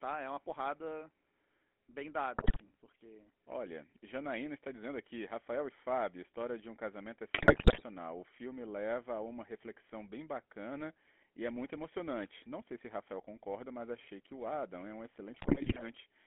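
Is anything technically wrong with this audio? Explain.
Yes. Throughout, the speech has a buzzy, gravelly roughness confined to roughly 250 Hz to 3.4 kHz, the mark of the GSM full-rate codec's pulse-driven vocal-tract model, consistent with a 13 kbps stream.

GSM bit errors cause brief squawks, pops and gargling at 2.36–2.61 s, 7.34–7.83 s and 15.34–15.86 s, where corrupted filter, pitch or gain values distorted the decoded frames.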